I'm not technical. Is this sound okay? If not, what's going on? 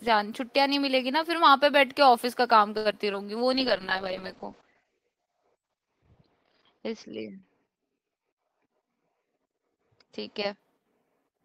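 No, there are a few problems, all typical of a call over a shaky internet connection.

At 2.77–2.87 s there is a short stall from a late packet. The sound freezes and drags for about 80 ms, then carries on. Unlike a loss, nothing is skipped.

Right after that, at 2.91–2.94 s and 3.12–3.15 s, there is short concealed packet loss. Here audio really is missing, and the gap is papered over with a quick smear or wobble.

From 3.54 s to 10.65 s there is a call bitrate drop. The voice turns muffled and rough because the connection squeezes it, with the worst stretch lasting about 2.6 seconds. This is a change in sound quality, not in timing.

Inside that stretch, at 8.48–9.24 s, there is a jitter buffer speed-up. Speech runs about 9% faster at the same pitch as the call trims backed-up audio, dropping around 70 ms in total.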